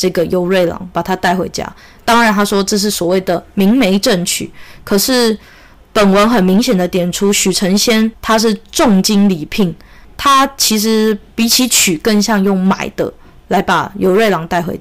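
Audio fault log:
Throughout: hard clipping. The speech is driven about 12 dB past what the signal path can pass, so around a tenth of all samples have their peaks sliced flat. Those square tops add high harmonics, giving a harsh fuzz on every loud syllable.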